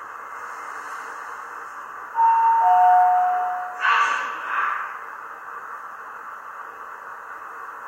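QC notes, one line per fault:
No faults heard in this clip. There is nothing here that calls for a timestamp.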